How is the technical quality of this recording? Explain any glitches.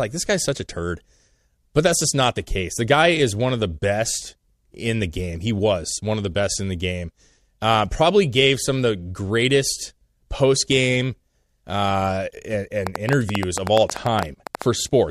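The recording has one clear glitch, a burst of clicking near the end.

A train of clicks runs from 12.87 to 14.63 s, starting right after "post game uh and". About twenty similar sharp pulses arrive at roughly 9.7 per second, spaced unevenly, and they stand out well above the speech, around 15 dB louder at their peaks. The likely cause is interference from nearby equipment or a faulty connection or power supply injecting repeated pulses, heard as an irregular popping tick laid over the speech.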